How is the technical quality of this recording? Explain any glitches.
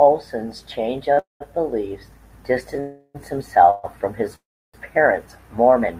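The speech has a run of network playback interruptions: one short stall and four longer freezes, each stretching the audio in time rather than dropping any of it.

At 1.13 to 1.19 s there is a short stall from a late packet. One packet missed its playout slot, so the receiver held the last sound for about 35 ms, then resumed exactly where it left off. Unlike a freeze, it is only a brief prolonged sound with a faint buzz or dip, and no silence.

Call audio freezes follow at 1.19 to 1.42 s, 2.80 to 3.16 s, 3.70 to 3.85 s (just before "from his") and 4.35 to 4.76 s (just after "from his"). These are likely caused by packets held up in transit, which emptied the jitter buffer. The last sound is extended as a fading buzz or hiss lasting 129 to 381 ms. In the first freeze the buzz or hiss falls to silence for about 150 ms, and in the last for about 320 ms. Speech then picks up from the same point, so gaps are inserted but nothing is missing. 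They differ from the stall in their length and, in two of them, the decay into silence.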